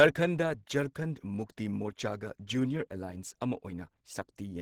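From start to finish the speech sounds muffled and hoarse, with a rough, grainy texture in the upper range; the damage is plainly audible. The cause is likely Opus compression at a low bitrate, around 16 kbps judging by the sound, where the encoder runs in its hybrid mode, coding the lower band with its speech model and filling the upper bands coarsely. Content still reaches about 20.2 kHz, so the bandwidth has not narrowed.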